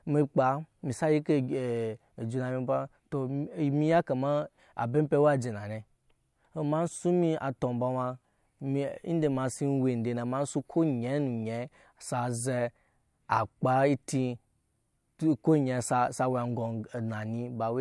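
No technical faults can be heard anywhere in the recording.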